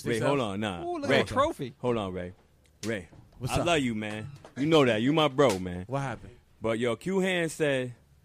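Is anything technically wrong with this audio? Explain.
No, there are no technical faults in this audio.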